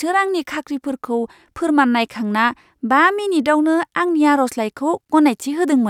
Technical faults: none

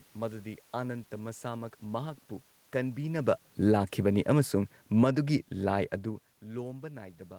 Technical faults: automatic gain falling

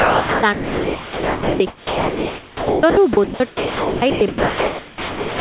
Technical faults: sound dropped by the voice detector

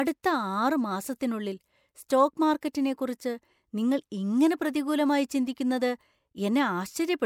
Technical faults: CD scratch ticks; pre-echo

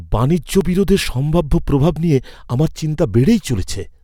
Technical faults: repeated buffer

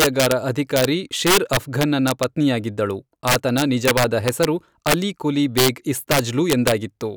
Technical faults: integer overflow

